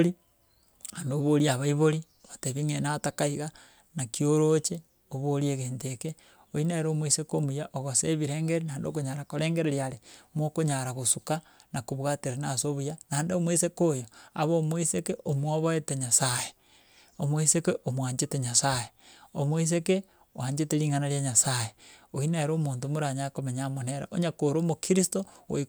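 A speech recording with nothing technically wrong to point to, so there are no times or causes to give.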